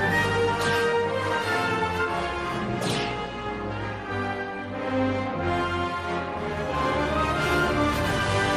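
No technical faults are audible.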